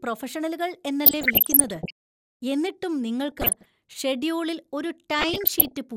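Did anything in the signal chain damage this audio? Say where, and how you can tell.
Yes, there's DAB burbling, which points to the reception and decoding stage rather than anything at the studio end. You get blips of noise and sub-band level jumps over the speech from 1.06 to 1.91 s, again from 3.32 to 3.66 s just before "ഷെഡ്യൂളിൽ ഒരു", and from 5.19 to 5.77 s right after "ഷെഡ്യൂളിൽ ഒരു". Weak reception let roughly 0.7 to 1 percent bit errors slip past error correction into the MP2 data. Corrupted scale factors then make individual sub-bands jump for up to a frame.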